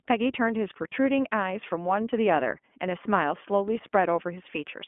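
Speech, carried through the iLBC codec, with plainly audible coding damage. The sound is confined to about 200 Hz to 3.4 kHz, so nothing above 4 kHz survives. Each 20 ms frame is coded on its own, which fits iLBC's 15.2 kbps mode and gives the speech a slightly rough, synthetic edge. There are also lost iLBC frames, from 0.90 to 0.94 s. The gap fits a single missing 20 ms frame. The decoder fills it by repeating the last pitch cycle mixed with noise, heard as a brief buzzy held vowel. Because the frames stand alone, the speech recovers almost immediately.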